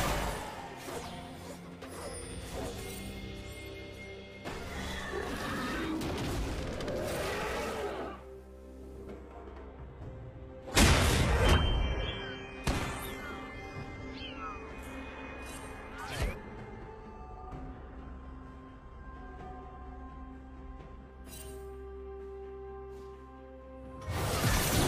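At 9.11 s the adaptive stream drops to a lower bitrate for 12 s: treble vanishes above 12.3 kHz, artefacts thicken, fitting a low-rate HE-AAC rendition, then it snaps back at 21.11 s.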